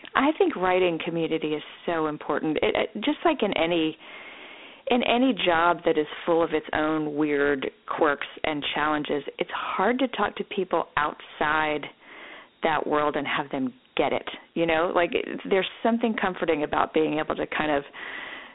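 The speech was stored as Dialogic VOX ADPCM, the 4-bit OKI scheme that phone menus and voicemail use, and its grit points to a 32 kbps stream at 8,000 samples a second. Each sample keeps only a coarse step from the last, so a plainly audible gritty hiss tracks the speech throughout. The line band runs from 250 Hz to 3.6 kHz, with nothing above 3.9 kHz, leaving the sound thin and muffled.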